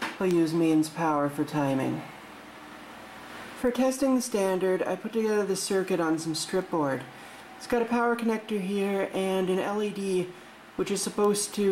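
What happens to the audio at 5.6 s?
A receiving clock not locked to the sender, around 50 ppm off, slips a sample about every 0.4 s, producing word clock ticks, sharp and uneven in strength, from 0.31 to 11.67 s.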